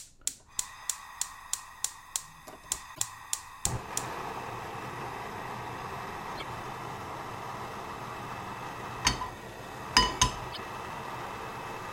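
A recording of sounds, broken three times by damaged data in a compressed stream, at 2.91–3.00 s, 6.34–6.43 s and 10.49–10.59 s. Each roughly 90 ms disturbance comes from corrupted frames while the decoder regains sync.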